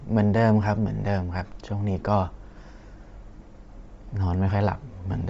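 A speech clip carrying plainly audible coding damage throughout, most likely Bluetooth LC3 compression. The voice has a breathy, grainy edge because much of the upper spectrum has been discarded and replaced with synthetic noise, a trade-off that fits a low bitrate of around 32 kbps with short 7.5 ms transform frames. On a spectrogram the high band looks patchy and uniformly speckled rather than showing clean harmonic striations. At 4.75 s there is a lost LE Audio frame, a brief 7.5 ms gap that fits a single missing frame. The decoder covered it by repeating the previous spectrum with randomised phase, so the sound momentarily turns into a noisy smear instead of a click or dropout. On the waveform this shows as a tiny stretch of irregular, noise-like texture where the periodic pattern of the voice briefly breaks. On a spectrogram it appears as a thin vertical slice where harmonic lines blur into diffuse noise before resuming.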